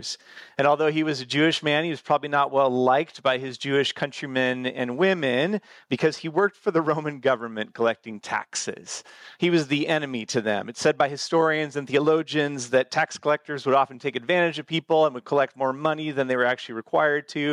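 No technical faults can be heard anywhere in this audio.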